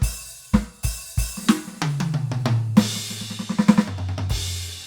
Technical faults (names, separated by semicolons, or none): none